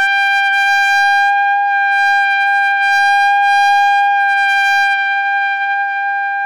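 Hard clipping runs through the whole clip. The signal arrives about 4 dB hotter than one stage can pass, so peaks are sliced flat. Roughly 7 percent of samples hit that ceiling. The flattened tops add high harmonics, heard as crackle on the peaks.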